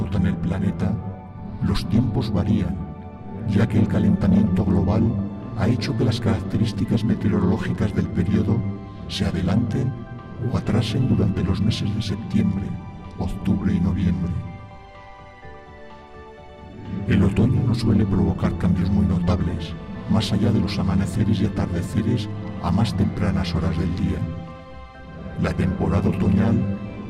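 No technical faults can be heard anywhere in it.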